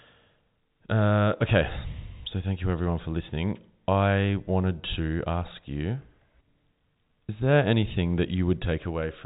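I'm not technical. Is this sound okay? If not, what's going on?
Yes, nothing is wrong here.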